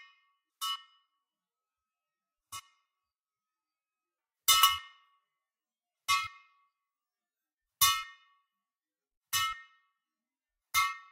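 No audible technical faults.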